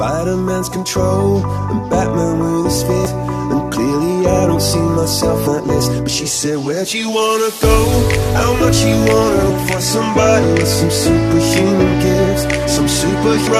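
Short blips turn up at 3.05, 5.46, 9.49, 10.43 and 13.46 s, each under 20 ms, and they're classic damaged data in a compressed stream. Some of the coded data at those points is corrupted, so the decoder misreads the affected frames, loses its footing and has to hunt for the next valid frame header before it can carry on. What you hear is a quick chirp, squawk, click or short hole that cuts across the sound.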